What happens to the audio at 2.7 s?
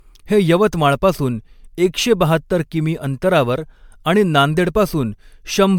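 At 2.7 s the speech has the same swirly, hollow smear it carries for the whole clip, with consonant attacks blurred rather than crisp. That's generation loss, likely from the audio being decoded and re-encoded around seven times with MP3, and the character fits something like 128 kbit/s. Each pass requantises on a shifted frame grid, so the noise and spectral holes stack up, and nothing is left above 20 kHz.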